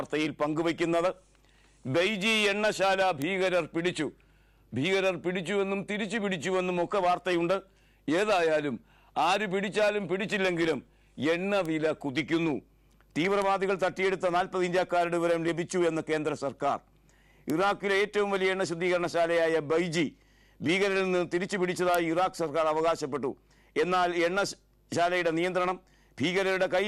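Isolated bit error spikes, where single flipped bits corrupt one or a few samples, jump the waveform briefly by a power of two. They produce sharp broadband ticks at 3.22, 11.66, 13.42, 17.50, 21.95 and 26.52 s, peaking at about -10 to -28 dBFS.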